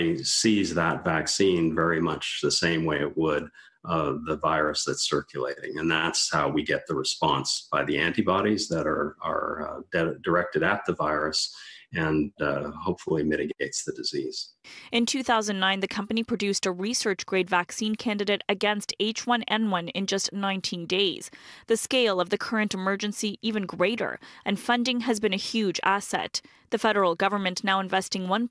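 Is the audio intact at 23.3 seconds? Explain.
Yes, the audio is intact at 23.3 seconds, with no dropout, glitch or other fault audible at that moment.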